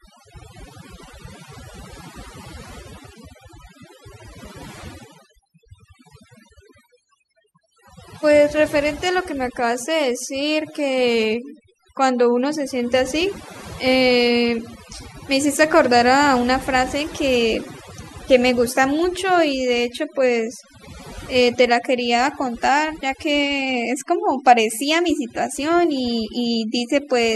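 Overdone noise removal runs through the whole recording. Noise reduction set too aggressively switches off individual frequency bands near the noise estimate, taking quieter speech detail with them. The background drops and breaks up into twinkling specks.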